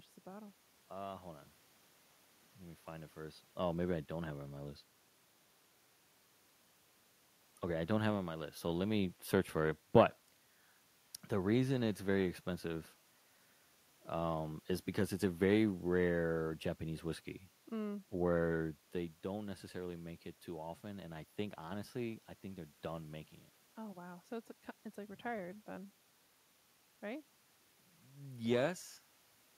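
The speech recording has no technical fault: the background sound belongs to the room around the microphone, and the level shifts around 3 s and again near 18.5 s come from the talker moving relative to the microphone, not from the system.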